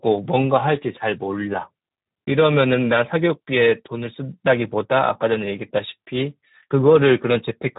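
From start to finish the speech carries Speex codec damage, plainly audible as a hoarse, noisy texture. With the level of damage pointing to a low setting near 11 kbps, the CELP coder has too few bits for the excitation. A spectrogram shows nothing above 3.8 kHz and smeared, noisy harmonics below it.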